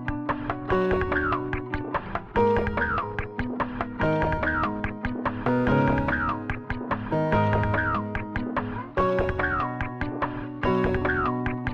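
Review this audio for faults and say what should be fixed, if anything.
Nothing in the audio needs fixing, as no faults are audible anywhere in it.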